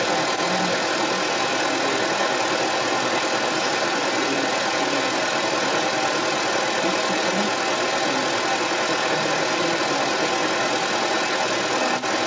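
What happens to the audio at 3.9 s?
At 3.9 s a second voice sits over the main speech. It is there from 0.0 s to 12.26 s, so this moment is inside one long stretch. It is about as loud as the main talker, even a little louder. This is the other side's voice leaking through. The cause is likely the talker's device playing the far end on its loudspeaker. The echo canceller then failed to clear that sound from the microphone.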